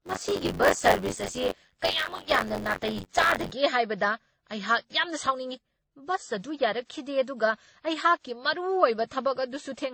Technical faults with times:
0.00-9.93 transcoding between lossy codecs
0.00-3.51 buffer tearing

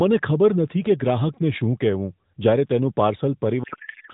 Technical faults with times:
3.64-4.13 codec payload misread

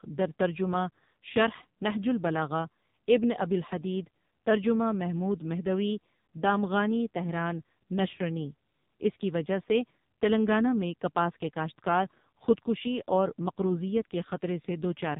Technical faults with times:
0.00-15.20 AMR narrowband mobile codec

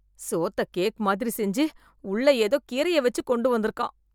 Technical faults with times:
0.23-3.70 periodic USB or driver dropouts

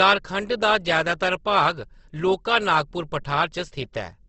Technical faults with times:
0.00-4.29 low-bitrate audio saved at a high bitrate

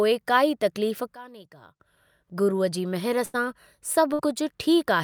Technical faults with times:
1.14-1.80 sudden gain jump
3.25-3.35 burst of packet loss
4.13-4.21 burst of packet loss

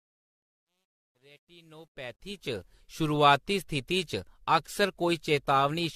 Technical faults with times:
0.00-5.96 generation loss
0.00-2.73 truncation distortion on a fade

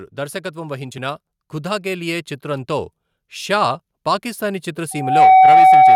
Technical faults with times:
0.52-3.87 automatic gain rising
4.91-5.96 loudspeaker feedback squeal

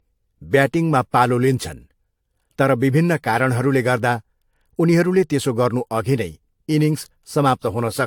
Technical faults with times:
0.00-8.06 generation loss

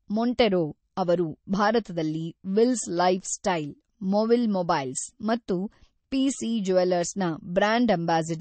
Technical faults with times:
0.00-8.41 MP3 compression

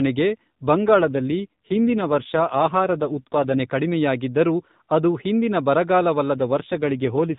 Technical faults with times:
0.72-3.61 AMR rate drop
6.34-7.38 AMR rate drop

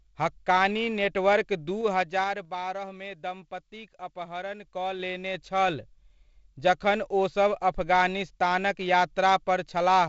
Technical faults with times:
1.71-2.60 zipper noise

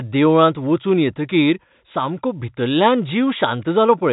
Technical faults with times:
none

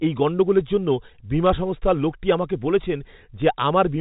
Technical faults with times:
1.46-1.50 bit errors on a digital phone line
3.40-3.42 bit errors on a digital phone line

